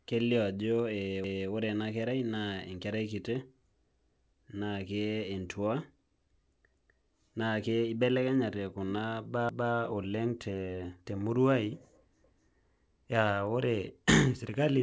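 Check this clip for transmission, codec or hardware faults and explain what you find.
Three faults are present: clock drift between sender and receiver, the repeated timing corrections it causes, and overlapping chunks. The call path itself, which cuts everything above 8 kHz as a 64 kbps G.722 link would, is heard as a limited top end along with its usual coding noise.

Clock drift between sender and receiver runs through the whole clip, with the sender's clock slower than the receiver's by roughly one and a half percent. Because audio arrives slightly more slowly than it is played out, the jitter buffer keeps drifting toward empty and the receiver has to compensate continuously. It sounds like a faint, persistent unsteadiness in pacing rather than any single event. Unlike a one-off dropout, it never settles.

Repeated timing corrections run from 0.16 s to the end, at an effective speed of 98%. 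The receiver stretches the audio by repeating tiny slivers to cover the shortfall from the slow sender. Each edit is small, so they come across as slight hiccups and a subtly dragging, uneven tempo. They always push the same way but are irregularly spaced, which separates them from the evenly timed stutters below.

Overlapping chunks occur at 1.24, 3.99, 6.74, 9.49 and 12.24 s. At each join, a 250 ms piece plays twice because each 2.5 s chunk begins before the previous one has finished. Each one is heard as a stutter. They recur at a strict 2.75 s rhythm, and that clockwork regularity marks them as chunk overlap rather than clock correction.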